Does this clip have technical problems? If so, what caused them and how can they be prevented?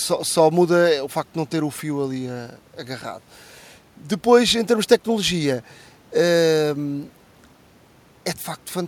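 No, nothing in this speech recording stood out as a technical problem on listening, so there is nothing here that needs preventing.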